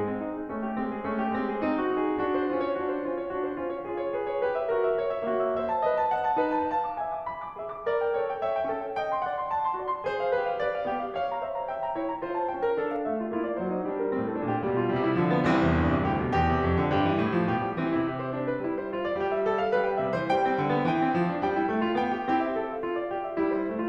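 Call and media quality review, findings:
Music goes dull and muffled from 12.96 to 14.96 s, top end sloping off smoothly, about 14 dB down at 10 kHz versus 1 kHz. De-emphasis applied wrongly: treble-cut filter hitting audio with no pre-emphasis, or running twice. Check the playback EQ stage.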